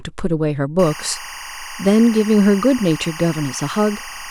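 From 0.79 s to the end of the speech there is timecode bleed: linear timecode from an adjacent track or cable has leaked into the recording. Its square wave flips between tones near 1 and 2 kHz and repeats in a pattern that fits 24 frames per second, so a steady chirping warble sits roughly 15 dB below the speech. A spectrogram shows two persistent bands near 1 and 2 kHz with harmonics above, and the waveform shows a fuzzy floor that never drops out between phrases.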